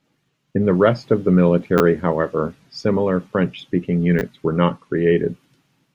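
At 1.78 to 1.80 s and again at 4.19 to 4.21 s, the speech has a repeated buffer. New audio arrived late, so one short block played three times, which fits a 10 ms buffer. Each event is a brief buzzy click, and about 20 ms of speech goes missing.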